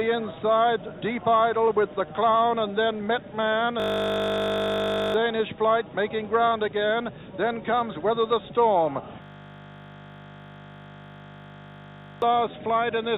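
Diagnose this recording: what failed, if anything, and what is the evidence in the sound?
The first fault is clock drift between sender and receiver, at the network and jitter buffer stage. The far end's clock runs a few percent slow relative to ours, so the buffer keeps draining, and the receiver has to keep stretching what it has to avoid running dry. You can hear this as a slightly dragging, uneven pace from start to finish, rather than at any single moment.

The second fault is the repeated timing corrections that come out of that drift. From about 0.01 s to the end at 13.18 s, the receiver keeps padding short pieces, always in the same direction, and the effect works out to playback running at about 97% speed. Over the clip the padding adds up to a bit under half a second. Each correction is tiny, so any that are noticeable come through as small hiccups and a wobbly tempo rather than obvious gaps. 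All of this sits inside the narrow band of the G.711 call path, which has nothing above 4 kHz.

The third fault is a system hang loop at the driver or buffer stage, and it happens twice. From 3.8 to 5.14 s, and again from 9.22 to 12.22 s, a 20 ms slice of audio repeats exactly. That produces a flat, steady buzz at 50 Hz instead of real sound. The host or driver froze while the hardware kept cycling its ring buffer, so we lose roughly a second and a half in the first loop and about three seconds in the second.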